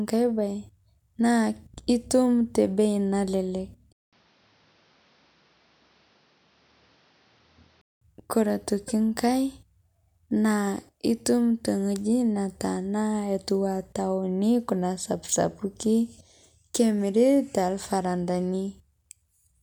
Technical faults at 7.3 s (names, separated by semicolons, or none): input switched to a poorer device